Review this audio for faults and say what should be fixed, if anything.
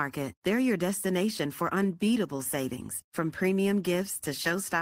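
Nothing stood out on listening to this speech recording, so there is nothing to fix.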